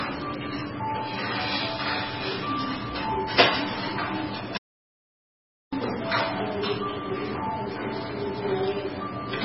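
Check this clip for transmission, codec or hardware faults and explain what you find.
Two faults are audible: heavy codec damage across the whole clip and one complete dropout.

Throughout, the sound is dull and watery, with nothing above about 5.5 kHz, swirling, smeared attacks and metallic chirps. This is likely heavy MP3 compression at a very low bitrate, around 16 kbps. Starved of bits, the encoder cut the treble at a fixed point and zeroed weaker frequency lines, which flicker between frames.

From 4.57 to 5.73 s the sound vanishes into total silence, with no room tone, for about 1.15 s, then resumes abruptly. This is an audio dropout to silence, likely from the input being lost while the recorder kept writing zeros. Whatever sounded during that gap is gone.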